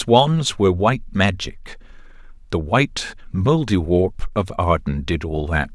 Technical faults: none

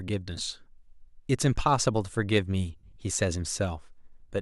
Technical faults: lost LE Audio frames

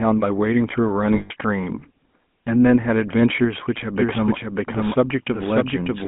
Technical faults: GSM full-rate codec; lost GSM frames; doubled audio track

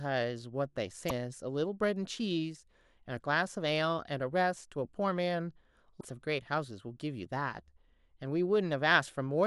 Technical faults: damaged data in a compressed stream

